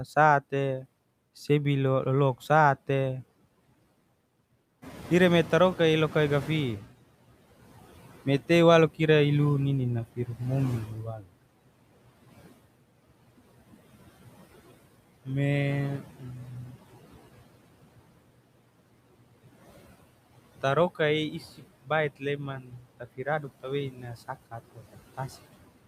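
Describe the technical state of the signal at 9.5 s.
At 9.5 s the signal shows noise suppressor artifacts, present for the whole clip rather than just this moment. The suppressor treats the steady room noise, which rose by about 10 dB around 5 s and sits about 18 dB below the speech, as something to remove band by band, frame by frame. It cuts that noise by about 17 dB in the pauses, so the background drops away between words and swells back underneath them.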